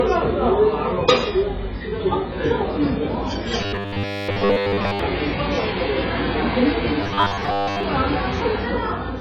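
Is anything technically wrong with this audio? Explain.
Yes, there are two kinds of fault.

AAC compression throughout: the sound is dull, smeared and fizzy, which points to heavy, likely very low-bitrate AAC-LC coding.

Robotic sound from repeated short buffers, 3.61 to 4.99 s and 7.01 to 7.84 s: most of the audio is replaced by a repeated 10 ms chunk, likely from starved buffers, imposing a rigid metallic 100 Hz buzz.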